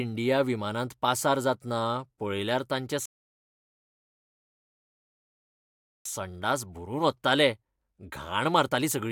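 A speech clip with one rebuffering stall: after "पासार जातना पळयल्यार तांचे" the audio drops to silence from 3.06 to 6.06 s, then resumes exactly where it stopped, adding 3 s with nothing lost. The player ran dry waiting for data. The waveform shows a flat gap, the spectrogram a blank column.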